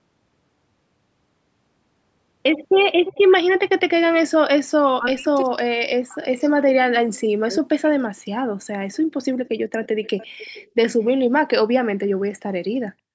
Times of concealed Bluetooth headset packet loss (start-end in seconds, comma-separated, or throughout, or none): none